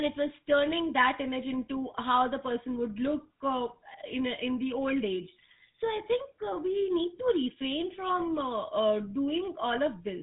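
Speech run through the GSM full-rate codec for the whole clip. It has that buzzy, gravelly roughness from the pulse-driven vocal-tract model, and nothing above about 3.8 kHz gets through. The damage is plainly audible, which fits the old 13 kbps full-rate coder.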